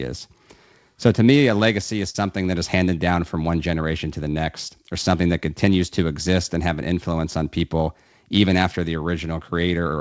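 At 2.10 to 2.16 s, a short concealed packet loss occurs. About 40 ms of speech never arrived, and the receiver extended the preceding sound, causing a brief smear.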